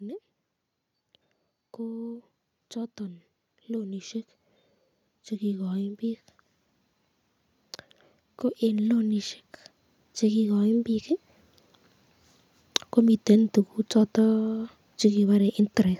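At about 10.19 s the automatic gain rising kicks in: the AGC decides the input's too quiet and eases its gain up by about 4 dB until 11.15 s. You hear the speech and the room noise swell together over that second.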